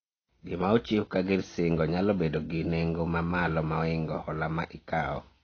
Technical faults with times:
0.00-5.44 AAC compression

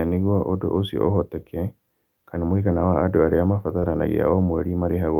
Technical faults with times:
3.79-3.88 short concealed packet loss

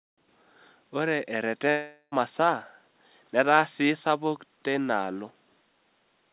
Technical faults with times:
1.70-2.14 long network dropout

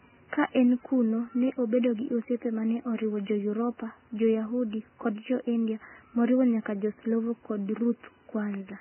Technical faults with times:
0.00-8.81 Vorbis compression

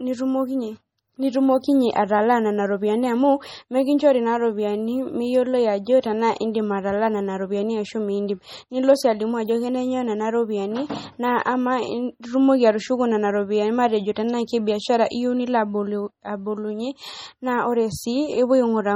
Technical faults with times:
0.00-18.96 MP3 compression

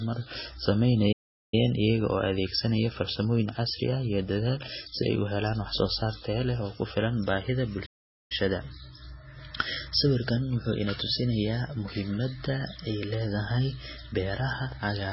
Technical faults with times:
0.00-15.12 MP3 compression
1.12-1.54 playback stall
7.85-8.32 playback stall

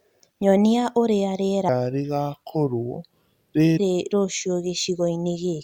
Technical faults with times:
1.69-3.77 section at the wrong speed

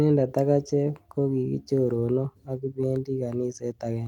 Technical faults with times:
none

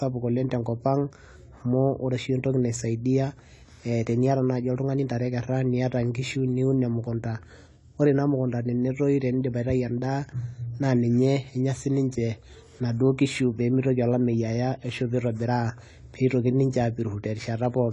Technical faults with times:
0.00-17.93 AAC compression

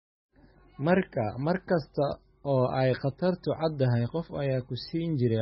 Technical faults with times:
0.00-5.42 MP3 compression

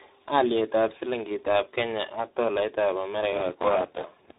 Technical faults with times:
0.00-4.38 tandem speech coding
3.32-4.38 buffer tearing

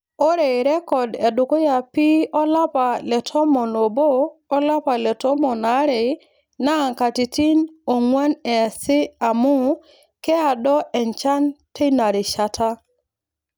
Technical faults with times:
none

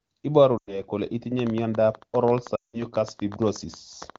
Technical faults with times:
0.57-0.82 lost AMR speech frames
1.39-4.17 train of clicks
2.55-2.85 lost AMR speech frames

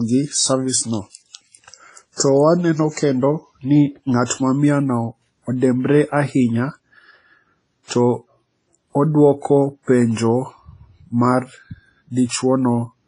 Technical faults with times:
0.00-13.07 WMA compression
2.16-2.20 pre-echo

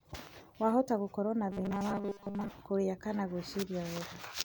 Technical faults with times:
1.51-2.48 robotic sound from repeated short buffers

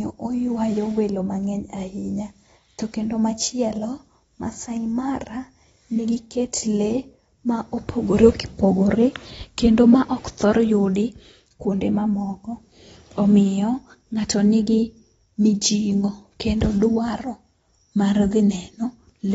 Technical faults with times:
0.00-19.34 AAC compression

